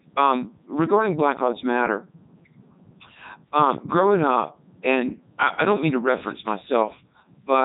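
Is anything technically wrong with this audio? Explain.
Yes. Throughout the clip the speech has gone through a Codec 2 vocoder, fitting its 3.2 kbit/s mode. Only pitch, voicing and envelope survive, resynthesised from sine waves, so it's heavily robotic and buzzy, with nothing above 3.8 kHz.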